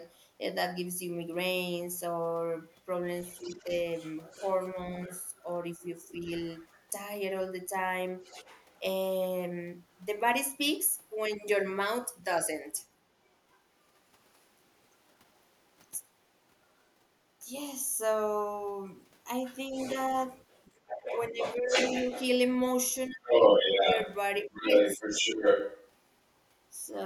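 An echo canceller likely left part of the loudspeaker signal in the microphone, so the other side's voice leaking through appears faintly from 2.72 to 10.01 s, well below the talker. Within that span, from 3.42 to 6.2 s, speech suppressed in double talk likely comes from the canceller turning down both voices at once, producing brief, shallow dips in the talker's level. The leak likely returns from 12.77 to 16.9 s, barely audible this time. From 19.45 to 25.91 s the leak is likely strongest, roughly as loud as the talker or louder. Between 19.69 and 25.34 s the suppression likely cuts deep, taking out around two seconds of the talker's speech in pieces.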